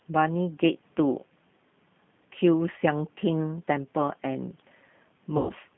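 It's a speech recording squeezed through a G.729 codec, so it's all boxed into about 150 Hz to 3.5 kHz with that rough, slightly synthetic 8 kbit/s edge clearly audible. Near the end, from 5.37 to 5.52 s, there's VoIP packet loss concealed by the speech codec. About 120 ms of audio went missing, and the decoder papered over it by stretching the last sound into a fading smear, with the voice staying weak as it recovers.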